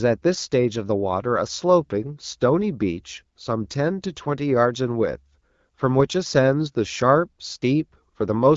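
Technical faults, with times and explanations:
No faults found; the speech runs over an HD Voice (AMR-WB) link at 12.65 kbit/s, coded up to 6.4 kHz with a noise-filled band above, as that path normally is.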